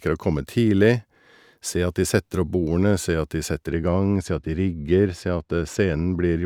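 Speech that turns dull and muffled from 3.67 s to the end at 6.46 s, the mark of de-emphasis applied wrongly. A treble cut meant to undo pre-emphasis has been applied where none existed, or a second time, so the upper range sags by about 11 dB at 10 kHz relative to 1 kHz. Unlike a codec's band limit or a low-pass filter, there is no abrupt cutoff: the highs fade gradually, still faintly present.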